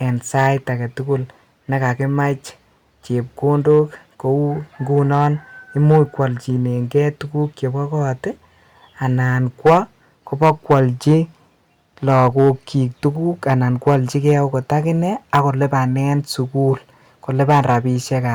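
Hard clipping runs through the whole speech recording. The signal was driven roughly 8 dB past what a stage in the chain could pass, so its peaks are sliced flat, though only a small fraction of samples, under one percent, actually hit the ceiling. The result is crackle and grit on the louder syllables. On a waveform the tallest peaks show squared-off tops. A spectrogram shows vertical smears of high-frequency energy at those moments.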